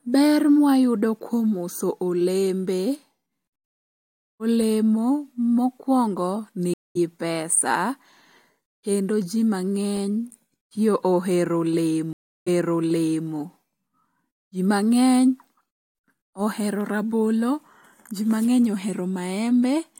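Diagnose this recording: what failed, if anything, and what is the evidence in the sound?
The network stage failed: the speech stream dropped and reconnected twice. At 6.74 s the sound goes silent for about 0.22 s, then resumes roughly a tenth of a second further on, so a little speech is skipped. At 12.13 s, just after "ti ohero", a 0.34 s gap follows. Playback then restarts 0.84 s earlier, so that stretch is heard again. Each time the player rebuilt its decoder mid-stream, and the first frame comes back fading in.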